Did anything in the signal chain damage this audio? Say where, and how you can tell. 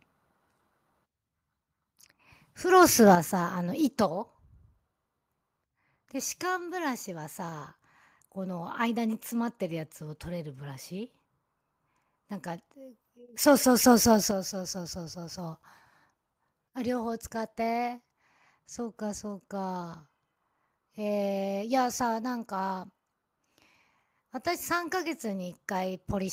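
Yes. At the converter input, the microphone level was likely set too high, driving peaks about 4 dB past full scale. From 2.76 to 3.11 s the loudest syllables have their tops sheared flat, with a small share of samples clipped. This is microphone overload, heard as a harsh, crackling edge.

Call processing then stepped the microphone volume down, the first time likely in response to that overload. At 3.15 s the level drops by about 8 dB in one step, and at 14.31 s by about 6 dB. Voice and background fall together, which points to device input gain rather than the source moving.

Call processing also stepped the microphone volume up at 13.29 s, raising device input gain by about 5 dB in a single step. Voice and background jump up together at the same instant. This is what an automatic gain adjustment on the input device sounds like.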